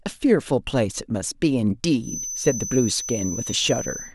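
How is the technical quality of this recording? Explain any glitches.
A feedback whistle runs from 1.99 s to the end of the speech at 4.15 s. It is a thin, steady tone at 6.1 kHz, sitting roughly 10 dB below the speech and swelling and fading slowly in level. The likely cause is a loudspeaker-to-microphone loop hovering at the edge of feedback: at that one frequency the loop gain is close to unity, so the tone keeps sustaining itself without building into a runaway howl.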